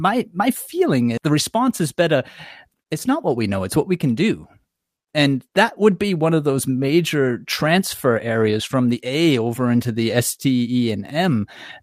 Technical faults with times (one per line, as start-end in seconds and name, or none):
1.17-1.30 skip ahead
2.68-3.44 jitter buffer speed-up